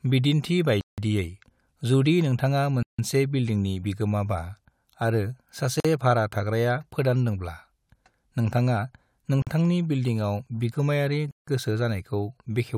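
Five times the speech cuts abruptly to silence and then resumes where it left off: at 0.81 s for about 170 ms, at 2.83 s for about 160 ms, at 5.80 s for about 46 ms, at 9.42 s for about 47 ms, and at 11.31 s for about 160 ms. The pattern is likely a Bluetooth stall, where interference delays packets, the headphones' buffer empties, and playback pauses until the resent audio arrives.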